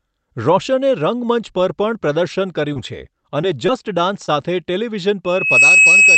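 Speech carries brief smears at 2.73 to 2.77 s, 3.41 to 3.45 s, 3.67 to 3.70 s and 4.26 to 4.30 s, where the sound wobbles. This is short concealed packet loss: each time, about 20 ms of audio, which fits a single lost packet, arrived too late for the decoder. The receiver stretched the preceding sound to cover the gap, from its pitch or as shaped noise, for 13 to 20 ms, then cross-faded back into the real signal.

From 5.24 s to the end, a single tone at 2.6 kHz swells over roughly 0.4 s into a squeal sitting about 10 dB above the speech. This is loudspeaker feedback squeal. The microphone was picking up the loudspeaker it fed, and at that frequency the loop gain rose above one, so the tone fed on itself and kept growing rather than dying away. It never collapses before the clip ends, which means the loop stayed closed throughout.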